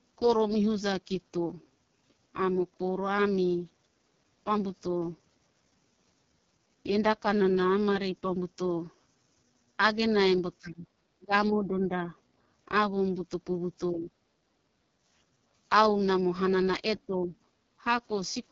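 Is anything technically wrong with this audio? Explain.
Yes, a few things. The whole clip runs through the AMR wideband (HD Voice) codec at 6.6 kbit/s, its lowest rate, so the speech sounds rough and raspy with nothing above 6.9 kHz.

The speech dips sharply, by something like 15 to 25 dB, at 10.59–10.89, 11.15–12.14, 13.91–14.11, 14.43–14.49 and 16.96–17.34 s. That's likely speech suppressed in double talk, with the echo canceller ducking everything while the far end talked.

The background is gated by the echo canceller at 14.77–14.96 s (about 15 dB down) and 17.62–17.76 s (about 16 dB). The room sound briefly dips, then comes back.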